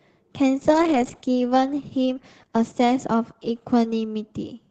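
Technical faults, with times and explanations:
0.64 s to the end, call bitrate drop: the speech turns coarse and watery as the encoder is starved of bits, which fits Opus falling from about 32 kbps to about 10 kbps, with the worst stretch lasting roughly 1.8 s. Fewer bits mean rougher quantisation and a narrower band. On a spectrogram, energy that reached 8 kHz before 0.64 s thins and retreats to a lower ceiling, with smeared, blotchy harmonics. The waveform envelope changes little.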